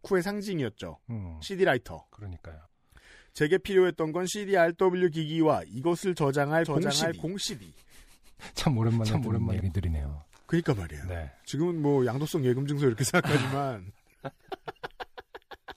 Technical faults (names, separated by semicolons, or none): doubled audio track